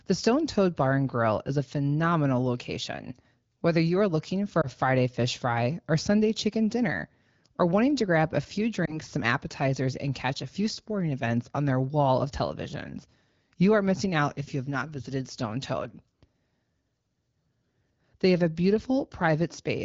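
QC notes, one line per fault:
4.62 to 4.68 s and 8.85 to 8.98 s, lost AMR speech frames: after "you are looking for", and between "to grab a few" and "some appetizers and catch", the speech briefly dips or warbles, each fitting one lost 20 ms frame. The AMR-WB decoder fills the gap by repeating the last good pitch and vocal-tract shape at falling gain. The result is a brief dip or warble rather than the clean silence or click of a plain dropout, and the voice then returns weak or rough for a moment.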